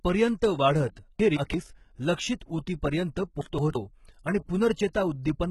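HE-AAC compression, throughout: the treble sounds synthetic and nothing is present above 11.8 kHz, with heavy codec damage overall, likely from HE-AAC v2 at a bitrate around 16 kbps. The codec keeps only the lower spectrum and regenerates the top by spectral band replication, copying lower bands upward under a coarse envelope. Because that treble is rebuilt rather than original, harmonics fail to line up across the crossover and s sounds come out gritty, metallic or lispy.

Chunks out of order, 1.20 to 1.54 s and again 3.41 to 3.76 s: in each span a block of about 170.67 ms plays one chunk late, after the chunk that should have followed it. No audio is lost, but the sequence is wrong and each span has three hard joins where unrelated material meets. Each moment sounds garbled and jumbled, and clicks may be heard at the joins.

Pre-echo, at 4.93 s: a short hiss of about 15 ms runs ahead of a sharp attack, and the attack itself sounds softened and smeared. 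The transform codec spreads its quantisation noise evenly across a whole block. Here the attack falls late in its block, so noise sized for the loud onset also fills the quiet instant before it, where nothing masks it.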